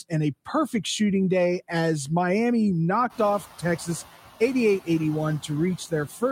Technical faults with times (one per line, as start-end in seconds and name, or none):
0.00-6.32 noise suppressor artifacts